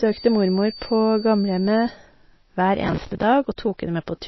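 From start to finish the speech sounds watery and swirly, with a dull top end where nothing reaches above 5.8 kHz. S sounds turn into metallic chirps, and the starts of syllables smear. This is likely MP3 compression at a very low rate, which fits a bitrate of about 24 kbps. Short of bits, the encoder cuts the treble at a fixed frequency and drops weak frequency lines, which then flicker on and off from frame to frame.

From 0.0 to 2.0 s a thin, steady whistle at 4.6 kHz sits behind the speech, some 20 dB below it, and swells and fades slowly in level. This is a feedback whistle. The likely cause is a loudspeaker-to-microphone loop held right at the edge of feedback, so one high frequency keeps ringing without running away, then stops at 2.0 s.

From 2.83 to 3.23 s a burst of gritty, tearing crackle rides on the speech and then clears. This is processor overload crackle. For that stretch the processor kept missing its deadlines to deliver each small audio buffer, and each miss was filled with old audio that has hard edges at both ends. 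The texture fits around twenty missed buffers, each of roughly 10 ms.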